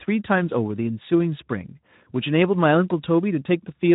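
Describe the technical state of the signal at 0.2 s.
At 0.2 s the signal is intact, with no dropout, click, distortion or other fault at that point.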